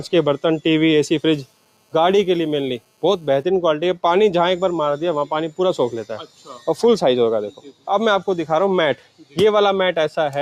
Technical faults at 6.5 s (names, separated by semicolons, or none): noise suppressor applied to music or sounds; sound cut by the noise suppressor